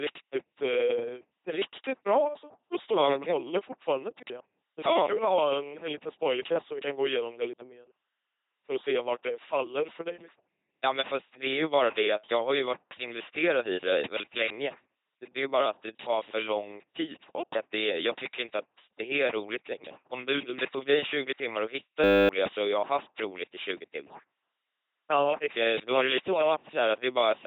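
Speech runs throughout through an LPC-10 vocoder, and the coding damage is heavy: every stretch is rendered as either a pulse-driven buzz or noise, giving a mechanical robot voice. The sound points to the 2.4 kbit/s military coder. A spectrogram shows nothing above 3.8 kHz, with smeared formant bands. A system hang loop follows "timmar att hitta" from 22.04 to 22.29 s. A single 10 ms slice of audio repeats 25 times, heard as a steady 100 Hz buzz, before "så har jag haft" resumes and roughly a third of a second of audio is lost. This happens when the machine freezes while the sound hardware keeps replaying its ring buffer. The waveform shows an identical short cycle tiled end to end, and the spectrogram shows evenly spaced horizontal lines at multiples of 100 Hz.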